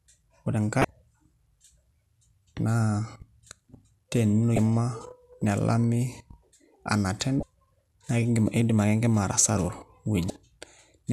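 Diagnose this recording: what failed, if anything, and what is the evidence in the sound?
Codec stage: damaged data in the compressed stream produces 34 ms glitches at 0.81, 4.55, 7.40 and 10.27 s, where the decoder loses frame sync.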